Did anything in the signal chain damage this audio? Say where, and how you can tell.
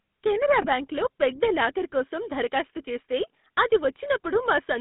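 Yes. The GSM full-rate codec damages the speech throughout, at the codec stage. The band runs only from about 150 Hz to 3.7 kHz, with a plainly audible buzzy, gravelly roughness. That comes from a vocal-tract model driven by regular pulses keeping every third excitation sample, which fits 13 kbps.

Lost GSM frames hit at 0.62 to 0.67 s, in the network path. A brief rough, metallic ring appears where one frame, about 20 ms, went missing. The decoder concealed it by repeating the last good frame's settings, so the sound is held rather than cut.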